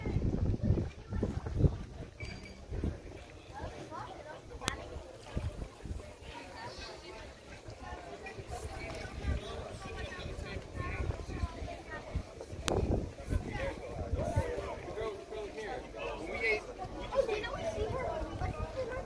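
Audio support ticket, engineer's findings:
Sharp snap at 4.68 s and again at 12.68 s, exactly 8 s apart. File header played as audio: looks like 8-second WAV pieces concatenated or streamed with headers left in, so the header bytes get played as samples. Check the joiner or stream packetiser.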